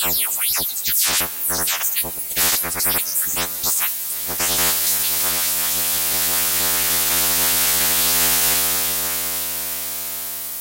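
From start to finish the audio is held to a low bit depth with noise shaping: every sample is rounded to just 5 bits, and the resulting rounding error is fed back so that it is pushed up toward high frequencies instead of spreading evenly. The result is a constant, thin hiss that climbs steeply toward the top of the band and sits nearly as loud as the sound itself, leaving it grainy and veiled throughout.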